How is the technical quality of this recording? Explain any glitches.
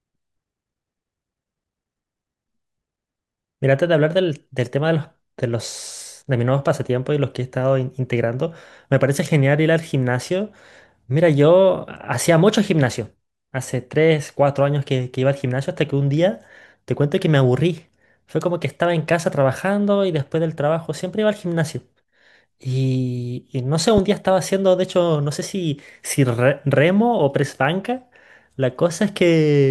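One glitch stands out in this speech recording: a single loud pop from 23.98 to 24.00 s. The likely cause is a sudden voltage pulse entering the signal chain, from a plug, a switch, a static discharge or a driver glitch. The circuitry downstream shapes that pulse into a brief burst of about 20 ms that peaks roughly 10 dB above the speech. It is heard as one sharp pop laid on top of the talking, which carries on uninterrupted beneath it.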